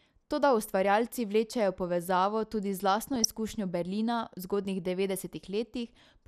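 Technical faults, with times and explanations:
Throughout: MP2 compression. The speech sounds dull and granular, with gurgling distortion and upper bands flickering in and out. This is likely MPEG Layer II coding at a low rate, around 80 kbps, where too few bits shut off upper sub-bands and coarsely quantise the rest.
3.14 to 3.25 s: DAB burbling. A short burst of noise blips sits over the speech in individual sub-bands. Corrupted samples got past error correction, consistent with a handful of damaged frames and a low bit error rate.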